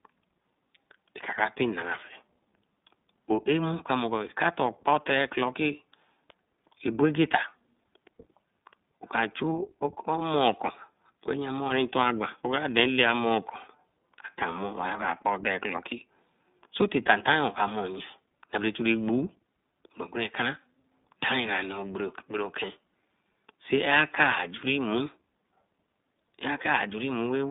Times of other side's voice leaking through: none

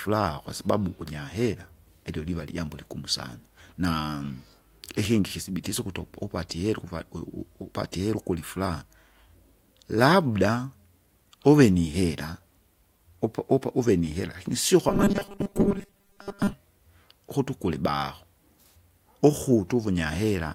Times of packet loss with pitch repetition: none

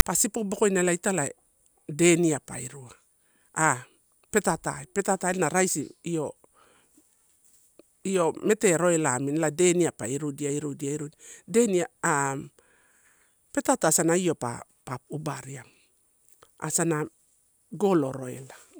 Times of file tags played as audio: 0.00-0.02

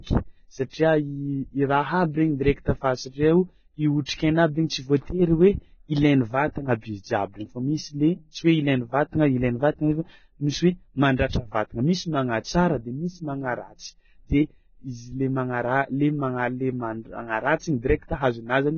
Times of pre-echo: 4.05-4.08

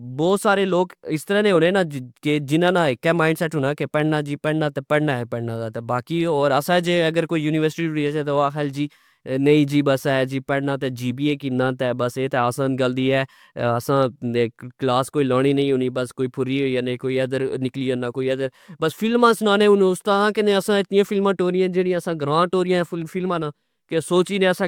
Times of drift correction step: none

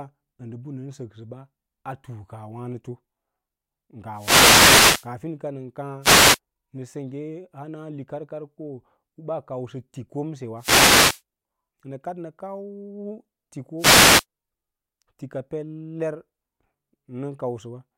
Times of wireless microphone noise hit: 4.12-5.10, 6.01-6.39, 10.57-11.22, 13.77-14.25

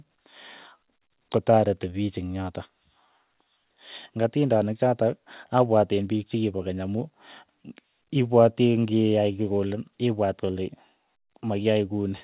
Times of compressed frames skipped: none

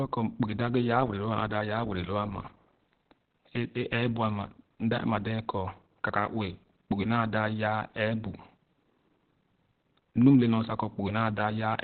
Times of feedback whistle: none

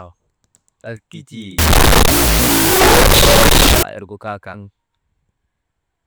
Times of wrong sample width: 1.59-3.83

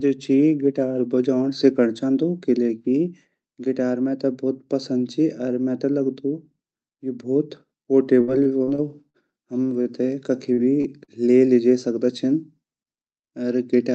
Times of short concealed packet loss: 10.53-10.60, 11.04-11.11

